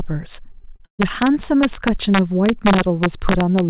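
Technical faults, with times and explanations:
Throughout, integer overflow: the loudest peaks of the speech were pushed about 4 dB past the largest value the integer format can hold, and instead of being limited they wrapped around to the opposite extreme. Only a small fraction of samples, well under one percent, cross that limit, but each one jumps across the full range in a single step, so loud syllables carry sharp, violent cracks that are far harsher than ordinary clipping.
0.52 to 1.01 s, repeated packet loss (robotic sound): four separate holes open in this half-second span, adding up to 220 ms of missing audio, the longest lasting 130 ms. The receiver covered 205 ms of those holes by stretching out the last decoded sound, so about 42 percent of the span is synthetic continuation. Because the patches follow one another closely, the speech turns choppy, with fragments dropped between the fills. 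The call path's G.711 mu-law coding leaves nothing above 4 kHz across the clip.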